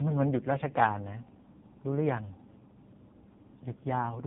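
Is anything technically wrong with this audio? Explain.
Yes. Tandem speech coding runs through the whole clip. The speech seems to have passed through two speech codecs in turn, which fits GSM full rate followed by AMR-NB. The second coder reworks the first one's damage. Nothing reaches above 3.7 kHz. The speech sounds rough, muffled and warbly.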